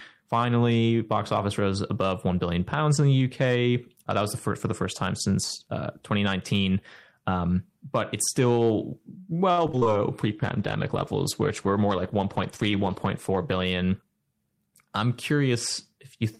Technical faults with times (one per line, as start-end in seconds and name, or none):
9.51-9.87 repeated packet loss (robotic sound)
10.22-13.71 call bitrate drop
13.31-14.03 jitter buffer speed-up